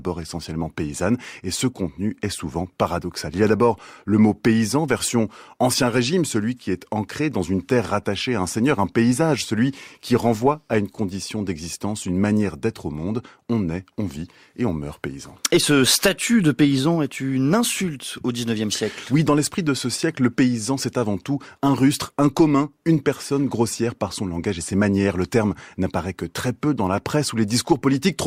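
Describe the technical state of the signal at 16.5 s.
At 16.5 s the speech signal is intact, with no fault audible at that moment.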